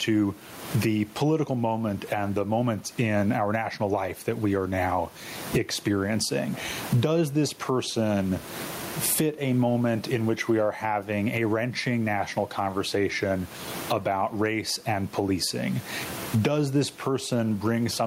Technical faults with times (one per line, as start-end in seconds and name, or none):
0.00-18.07 gain pumping